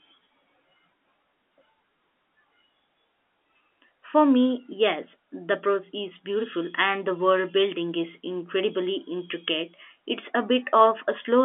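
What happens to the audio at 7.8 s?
Nothing goes wrong at 7.8 s: the speech carries on intact through that moment, with only the narrow, band-limited character of G.711 telephone coding that runs through the whole clip.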